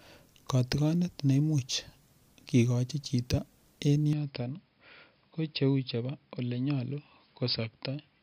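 Speech; from 4.13 s it abruptly turns duller, with nothing above 5.2 kHz and about 5 dB lower level, with no gap. The likely cause is the input switching to a poorer device.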